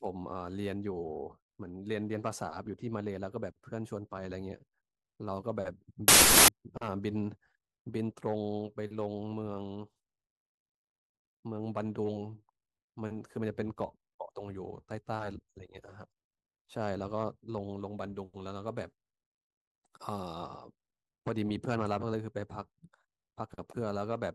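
From 6.08 to 6.48 s the speech collapses into loud, harsh noise with the original barely audible beneath it: a wrong sample width fault. Data written with four bytes per sample were read back three bytes at a time, so most values mix bytes from neighbouring samples. The buried speech runs at 0.75 times its proper speed and pitch, which fits 32-bit audio read as 24-bit. That slowed, lowered residue distinguishes it from a byte-order error, which keeps the original speed.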